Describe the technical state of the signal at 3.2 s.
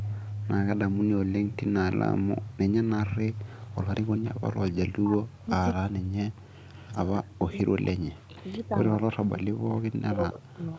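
At 3.2 s the speech is intact, with no fault present, only the expected call microphone processing, which trims the lowest bass and leaves nothing above 8 kHz.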